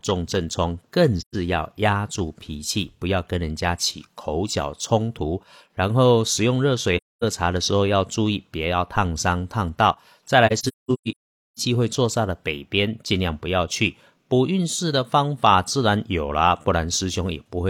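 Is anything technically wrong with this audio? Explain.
Yes. The speech has three dropouts from AAC frame loss with muting. Compressed frames failed to arrive, so the decoder zeroed their spectrum, and the overlapping transform windows faded the sound out and back in over roughly a frame rather than cutting it. The gaps fall at 1.20 to 1.35 s, 6.96 to 7.23 s, and 10.46 to 11.59 s, the last a scattered cluster whose longest silence is about half a second. Each is a soft-edged hole.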